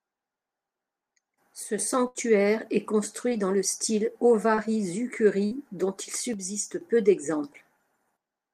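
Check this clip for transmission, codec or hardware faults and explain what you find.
Yes, the speech has three kinds of transmission fault: two channel dropouts, two bursts of packet loss and two short concealed packet losses.

One channel drops out from 1.63 to 1.79 s and again from 6.34 to 6.81 s, just after "dont il". The level falls abruptly by about 6 dB and then returns. The likely cause is one side of a stereo feed vanishing before the mono fold-down, so only half the shared signal remains. On a waveform this shows as a sudden step down in envelope, with square edges at both ends.

A burst of packet loss occurs at 2.07 to 2.17 s and at 5.45 to 5.53 s, just before "dont il". Roughly 80 ms and then 60 ms of speech never arrived in time. The receiver extended the last sound and faded it over about 74 ms and 58 ms, so you hear a held buzz or fading hiss, then a jump forward. On a spectrogram the harmonics flatten into stretched horizontal lines that dim before the real speech resumes.

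Short concealed packet loss occurs at 3.29 to 3.33 s and at 4.55 to 4.59 s, right after "dans le style". Each gap is about 20 ms, filled by continuing the previous pitch or noise and blending back. It sounds like a brief smear or wobble. On a spectrogram it appears as a thin, slightly blurred vertical strip where the fine detail briefly smooths out.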